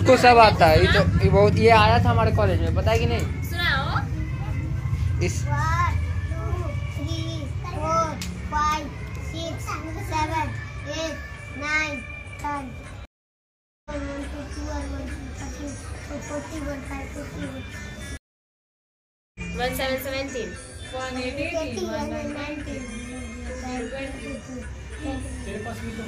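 Stream reconnects occur at 13.05 s and 18.17 s. Each time the connection dropped, the player fell silent, then rejoined and started a fresh decoder partway through the stream. The first gap lasts 0.8 s, and the sound resumes roughly 0.7 s further on than where it broke off. The second silence runs 1.18 s, and the sound picks up about a second later. Material from both breaks is skipped rather than delayed, as on a live feed.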